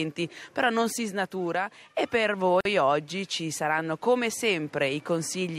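At 2.61 s the sound drops out for about 46 ms, resuming at 2.65 s. This is a gap at a join of encoded pieces: two separately encoded segments were butted together without trimming, so the encoder's start-up delay and the padding on the previous segment's final frame both remain as silence. The edges of the dropout are smeared by the codec, and the sound continues exactly where it left off.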